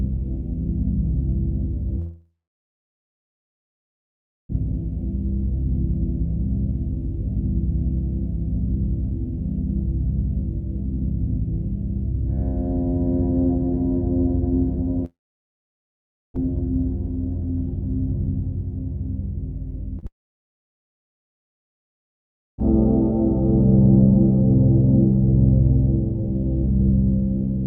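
This recording of everyday sounds has gaps that most likely come from long network dropouts, at 1.99 to 4.51 s, 15.05 to 16.43 s and 20.07 to 22.6 s. About 2.5 s, 1.3 s and 2.5 s of audio never arrived. In each gap the last sound trails off briefly, then silence holds for roughly 2.2 s, 1.2 s and 2.5 s before the audio resumes with that stretch missing. Just before the third gap, a short concealed packet loss from 19.99 to 20.04 s drops 40 ms, and the receiver's continuation of the preceding sound leaves a brief smear.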